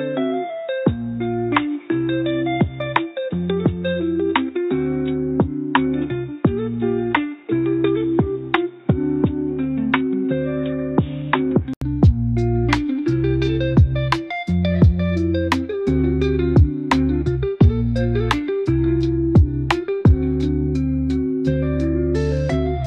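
Input switched to a poorer device, from the start to 11.82 s: for this opening stretch the sound is dull and boxy, with nothing above 3.8 kHz, a somewhat lower level and a faint background noise of its own underneath. At 11.82 s a gap of 80 ms is followed by a sudden return to full, clear sound. The likely cause is a narrowband input, such as a headset call profile, being replaced by the normal microphone.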